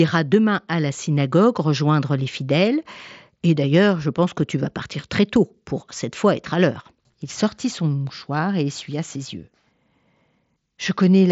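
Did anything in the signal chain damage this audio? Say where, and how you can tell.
No, nothing in the chain harmed this speech; it came over a Bluetooth headset link using the mSBC codec, which you can hear in how the sound stops at about 7.7 kHz, and its grain and bandwidth fit a rate of roughly 61 kbps.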